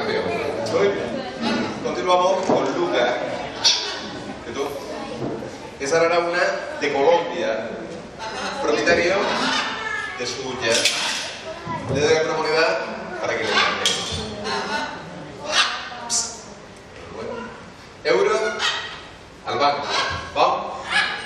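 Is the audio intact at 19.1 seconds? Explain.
Yes, the audio is intact at 19.1 seconds, with no fault at that moment.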